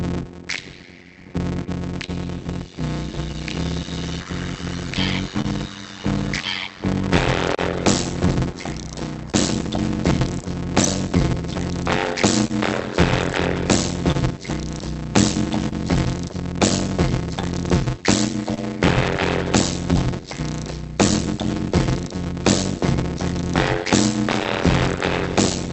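All through this audio there's a steady buzz at 91.9 Hz and everything drags at about 0.533 times normal speed while the pitch stays roughly where it should be. That's a block size mismatch (padded): one stage hands over short blocks and the next reads longer ones, topping each up with zeros. The pattern fits 256-sample writes into reads of about 480 samples. Underneath that, there's clock drift between sender and receiver, with the sender running roughly 2 percent slow. The jitter buffer keeps drifting out of step, so the timing wobbles slightly and unevenly across the whole clip. The fix-up shows as repeated timing corrections from 0.86 to 23.19 s. These are small, irregular hiccups where the receiver repeats short slices to fill in, adding something like 70 ms in total. There are also scattered short gaps, presumably lost or late packets patched by stretching the last bit of sound into ticks and smears. 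From 2.06 to 18.59 s there are about fifteen of them, totalling around 300 ms, the longest about 30 ms. From 21.13 to 25.52 s there are about seven more, around 100 ms in all, none longer than about 10 ms. It all comes through an Opus call path at 48 kbps, and its 8 kHz bandwidth limit trims the top end.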